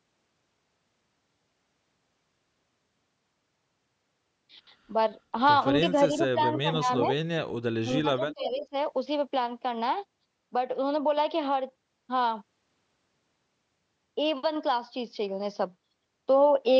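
Speech recorded through a call's microphone processing, with content reaching up to 8 kHz, has the talker's level dropping out in three places: 6.09 to 6.41 s, where it sinks by roughly 15 dB; 6.58 to 7.08 s, by about 10 dB; and 7.81 to 8.75 s, where it falls by around 20 dB and holes open through about half a second. This is speech suppressed in double talk, likely the echo canceller ducking its own talker because it could not separate that voice from the far-end loudspeaker signal while both sides were speaking. Inside those dips, at 7.03 to 7.07 s and again at 8.30 to 8.34 s, short faint scraps of voice arrive 352 ms late at about 15 dB below the speech. That delayed copy is an echo leak, most likely residual loudspeaker sound that the canceller failed to remove and that was sent back down the line.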